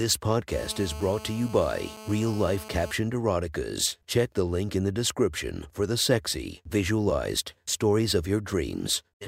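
From 0.52 s to 2.91 s the speech carries GSM phone buzz: a nearby 2G handset on a call bursts 217 times a second, and the audio circuitry rectifies those pulses into a steady, raspy 217 Hz buzz rich in harmonics, about 16 dB below the signal.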